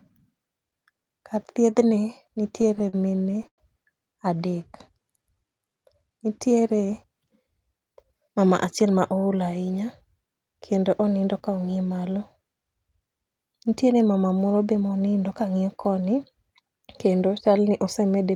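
Right after "kar thiedhni", from 2.55 to 3.60 s, the speech hits repeated stalls, a proper stutter. Packets were turning up late, so the jitter buffer kept running dry, fifteen times in about a second. Each time the receiver stretched out the last sound to cover the hole, about 257 ms in total and a quarter of that stretch, the longest patch lasting 102 ms. Nothing's actually lost, but it drags and catches.

Then from 4.92 to 5.78 s there's a jitter buffer slow-down. The buffer was short on reserve, so the receiver repeated single pitch periods and slivers of pauses over and over, padding in 118 ms. The speech plays at about 87 percent speed with the pitch unchanged, so sounds get drawn out and you may catch a faint warble.

From 7.73 to 9.20 s, just before "ool ahinya", it flips to a jitter buffer speed-up. Too much audio had piled up in the buffer, so the receiver trimmed short chunks of a pitch period or a few, again and again, shaving off roughly 150 ms. 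Pitch stays put, but the speech runs at about 108 percent speed and comes across a little rushed.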